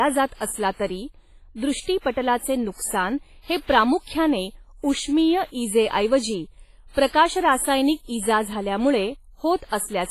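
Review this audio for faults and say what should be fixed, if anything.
The speech was likely passed through WMA compression at a low bitrate, which fits about 24 kbps. Its transform coder spreads heavy quantisation noise across long blocks and zeroes weak components. Throughout, the sound rings and turns washy, with hiss that breathes with the signal and nothing above 15.3 kHz. Encoding at a higher bitrate or keeping a lossless master would prevent this.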